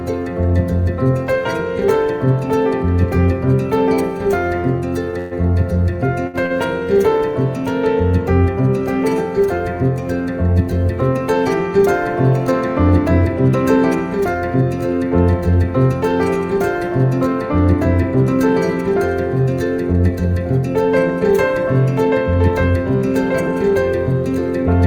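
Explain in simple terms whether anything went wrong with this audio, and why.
Between 5.11 and 6.53 s, data arrived too late four times, causing repeated stalls (stutter). Each wait was bridged by stretching sound, so the audio drags and hiccups, though nothing is lost.

Later, a backlog built up and the player trimmed tiny slices to catch up, a jitter buffer speed-up. Audio runs about 6% fast from 13.76 to 14.62 s and 3% fast from 15.90 to 19.94 s, at unchanged pitch.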